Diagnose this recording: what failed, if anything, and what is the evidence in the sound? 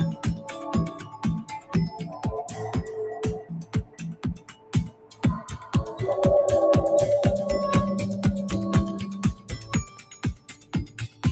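The level breathes throughout, with held portions sinking and attacks punching through, a swing of around 15 dB. This is a call-processing fault: a noise suppressor applied to music or sounds, built for speech, treats steady tones and tails as noise and ducks them.

Sound cut by the noise suppressor is audible as dips at 0.17–0.54, 0.91–1.25, 1.44–1.74, 2.05–2.24, 3.4–5.24 (deepest, about 14 dB), 9.38–9.72 and 9.88 s to the end (about 13 dB). Sustained material fades or truncates while transients survive, because the suppressor's gain follows stationarity. The top end stops near 8 kHz, consistent with a wideband Opus call path.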